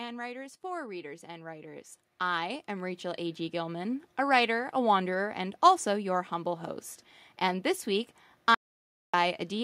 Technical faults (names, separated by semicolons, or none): automatic gain rising